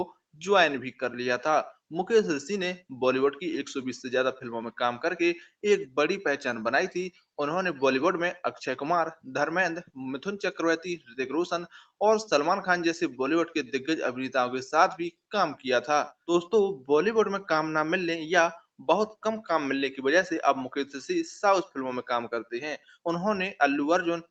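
At 10.99 s the sound is cut by the noise suppressor for about 150 ms, until 11.14 s. The suppressor misjudged the sound as noise and pulled its level down by up to about 12 dB, so that stretch dips audibly.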